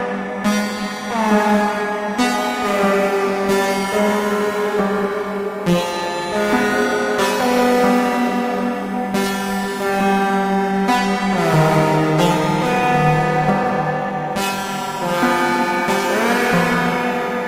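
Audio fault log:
Nothing to flag here; the sounds in this recording come across with no audible technical faults at any point.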